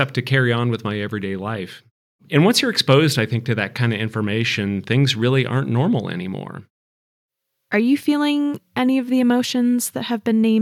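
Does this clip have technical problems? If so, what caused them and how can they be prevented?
No, there's nothing technically wrong to hear in this speech clip, so there's nothing here that needs fixing or preventing.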